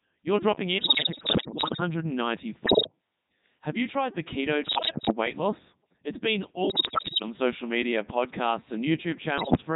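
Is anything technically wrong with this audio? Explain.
Yes. The speech runs through the Codec 2 vocoder throughout, and five bursts of bit errors on digital voice radio break it up further.

The Codec 2 vocoder damage spans the whole clip and is heavy. The robotic, buzzy tone fits Codec 2's 3.2 kbit/s mode. Only pitch, voicing, energy and a spectral envelope are sent, and the decoder rebuilds the voice from sine waves, so the original waveform is gone. This sets it apart from a low-bitrate waveform codec, which leaves smeared or swirly detail. Here the voice itself sounds synthetic.

The bit errors on digital voice radio fall at 0.78 to 1.80 s, 2.66 to 2.92 s, 4.64 to 5.12 s (right after "you tried the keto"), 6.70 to 7.22 s (just before "social media podcasts"), and 9.38 to 9.62 s. The corruption is severe, with roughly one bit in ten to one in five flipped, the worst in the burst near 7 s. 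Each bit steers a whole frame's pitch, level, voicing or spectrum, so the voice lurches in pitch and loudness and turns into bleeps, warbles and gibberish. Packet loss, by contrast, leaves silent gaps or repeated sound.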